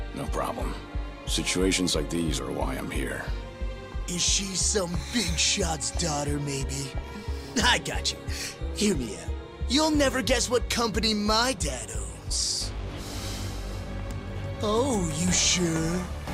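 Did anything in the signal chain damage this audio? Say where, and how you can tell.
No, nothing in the signal chain audibly damaged it.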